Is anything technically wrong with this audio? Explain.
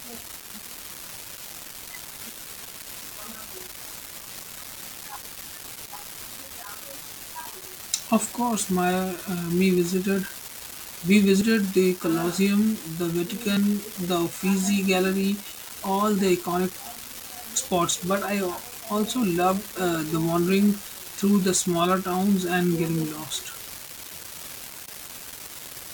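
Yes, there are two separate problems in this speech recording.

Throughout the clip there is an unreliable data bit: one line carrying the digital sample values is marginal, so that bit flips in a random fraction of samples. Each flipped bit adds a spike of fixed size to the waveform. Because this happens regardless of what is being said, it comes through as a constant fine crackle or fizz that stays audible in the pauses between phrases.

There are also five points where the speech jumps forward abruptly, at 4.20, 4.97, 7.89, 11.41 and 13.57 s. These are likely dropped buffers from an overrun, where the software failed to collect incoming samples before the hardware overwrote them, and the audio on either side was spliced together. The missing stretches are short, around 20 ms at 4.97 and 7.89 s, about 40 ms at 4.20 s, and roughly 70 ms at 11.41 and 13.57 s.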